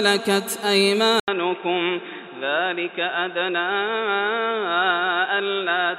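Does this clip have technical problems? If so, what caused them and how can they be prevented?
Yes. At about 1.2 s the sound drops out for roughly 80 ms, then returns duller and boxier, with nothing above 3.8 kHz, a level around 5 dB lower, and a new background noise sitting well beneath the signal. It stays that way to the end. This is likely an input switched to a poorer device, such as a second microphone or a headset's call profile, whose narrower band, different gain and own noise replace the original path. To prevent it, lock the recording input to one device and disable automatic device switching before recording.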